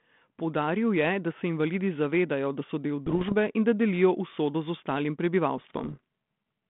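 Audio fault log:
3.06–3.33 s and 5.58–6.00 s, bit errors on an ADPCM link: pops and gritty bursts with brief level jumps. The first lands after "zavedajo da so del" and before "in da delijo usodo." A small fraction of flipped bits knocks the decoder's step size and predictor off track, so each hit rings on for milliseconds. The narrow 150 Hz to 3.5 kHz band suggests a 32 kbit/s G.726 link.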